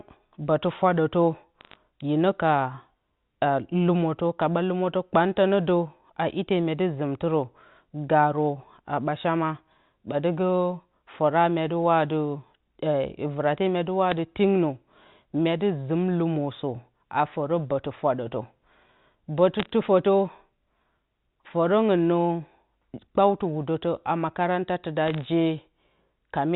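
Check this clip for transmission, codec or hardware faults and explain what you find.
One kind of fault is present in the speech: bit errors on a digital phone line, in four short bursts. The G.711 mu-law telephone coding underneath stays band-limited below 4 kHz.

Bit errors on a digital phone line occur at 1.61 to 1.76 s, between "bǝtɨ fwadǝtǝ" and "hine ka"; at 14.10 s, just after "vɨrate mya"; at 19.60 to 19.70 s; and at 25.06 to 25.28 s. Flipped bits, a fraction of a percent, each corrupt one sample. Hits on sign or high bits give sharp ticks and brief crackle over intact speech. A waveform shows isolated single-sample spikes. A spectrogram shows thin vertical lines across the whole band.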